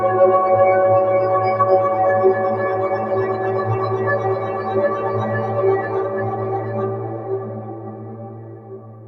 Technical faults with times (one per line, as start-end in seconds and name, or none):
none